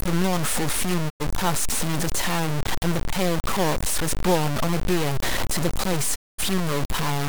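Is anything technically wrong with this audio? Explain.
Yes. Two faults are present.

Low bit depth without dither runs through the whole speech clip. Every sound is coarse and grainy, and the grit rises and falls with the voice rather than sitting underneath it. The distortion is roughly as loud as the speech itself. Quiet syllables break up into sputtering steps or drop out. The likely cause is truncation to very few levels with no dither, which fits a 3-bit signal. Because the rounding error tracks the waveform, it sounds like distortion, not steady hiss.

Digital broadcast dropout occurs twice. From 1.08 to 1.22 s, the sound fades out over about 20 ms and goes silent. About 96 ms is missing, which fits three lost frames. From 6.14 to 6.40 s, a longer gap removes about 224 ms, consistent with seven lost frames. Each time, the receiver stopped getting frames it could decode and muted until valid data returned. 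Whatever was sent during those gaps is gone.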